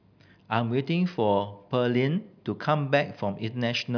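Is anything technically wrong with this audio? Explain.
No, nothing stood out as technically wrong on listening to this speech recording.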